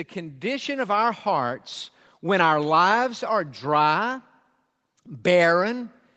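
From 0.13 to 1.61 s there's automatic gain rising: the gain control decided the input was too quiet and ramped up by about 7 dB, so speech and background swell together. The dull top, nothing above 8 kHz, fits a wideband Opus call path.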